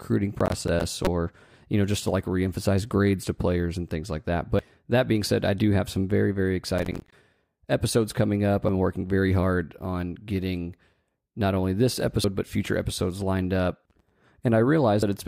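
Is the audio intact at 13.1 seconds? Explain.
Yes, the speech at 13.1 seconds plays through cleanly, with no dropout, click, distortion or other fault at that moment.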